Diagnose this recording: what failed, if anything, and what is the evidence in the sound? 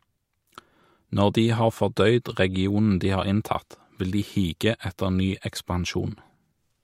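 Nothing failed; no faults heard.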